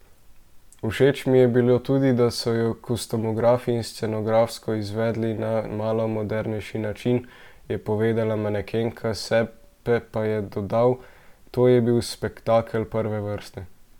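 No technical faults can be heard anywhere in this speech recording, and the signal stays continuous and stable throughout.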